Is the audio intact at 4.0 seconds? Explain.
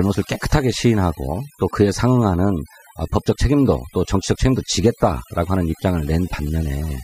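No. At 4.0 seconds, as across the whole clip, the gaps around the speech drop to near silence scattered with twinkling specks. This is overdone noise removal: a noise reducer set too aggressively pulls individual frequency bands down or out whenever they sit close to its noise estimate. Softer components of the voice fall below that threshold and vanish along with the noise, leaving the isolated tonal flickers.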